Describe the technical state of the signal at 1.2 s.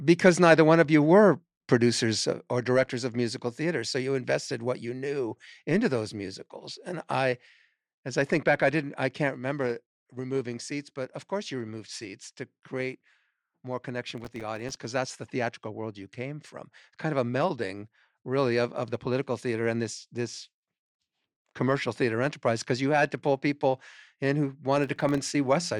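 At 1.2 s the signal is intact, with no audible fault at that moment.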